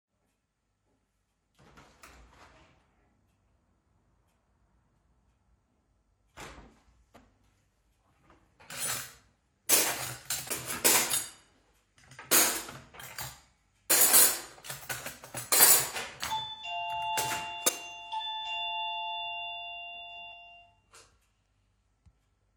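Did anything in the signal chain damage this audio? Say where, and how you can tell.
Yes, there is damaged data in the compressed stream, a fault at the codec or storage stage. Corrupted bytes reached the decoder, which misread those frames and lost sync until it found a valid header. Each event is a brief chirp or blip lasting about 20 ms, at 7.16 to 7.18 s, 13.90 s, 17.67 to 17.69 s, and 20.32 to 20.34 s. These short, isolated bursts at irregular intervals point to corrupted frames rather than to analogue or buffer faults.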